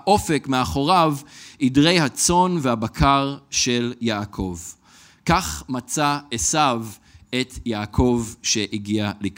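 At 3.54 s to 3.56 s the speech has chunks out of order: a 10 ms chunk of audio arrived or was written one chunk late, so it plays after the chunk that should have followed it. No audio is missing, but the two chunks are swapped, leaving three hard joins where the waveform jumps abruptly. The result is a brief jumbled flicker in the speech.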